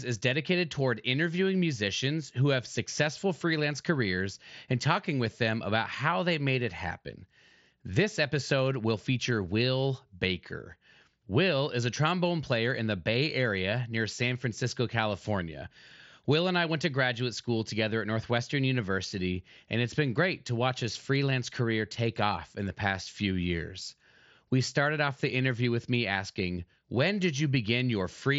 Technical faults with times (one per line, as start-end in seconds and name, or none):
none